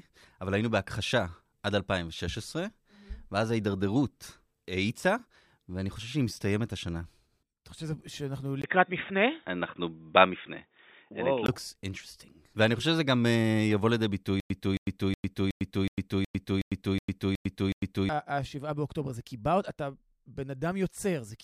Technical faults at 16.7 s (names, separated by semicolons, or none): stutter with silent gaps